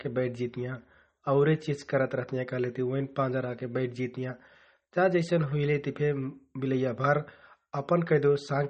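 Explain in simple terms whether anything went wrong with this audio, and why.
Throughout the speech, the sound is dulled and plainly watery. Nothing comes through above about 8.4 kHz, so crisp s sounds lose their edge, and the quieter detail seems to flicker in and out with a swirly, metallic quality. That flickering is what points to likely MP3 compression squeezed too hard, rather than a simple treble cut or a narrow phone line: a plain filter would sound muffled but steady, without the bubbling and chirping that the encoder causes when it drops faint parts of the sound.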